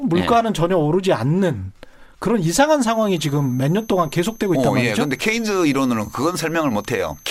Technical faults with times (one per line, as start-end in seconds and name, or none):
2.90-7.31 switching supply whistle